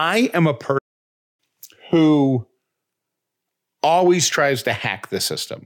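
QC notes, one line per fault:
0.78–1.40 s, playback stall: after "am a" the speech cuts to about 0.60 s of silence, likely a starved or blocked player, showing as a flat waveform gap.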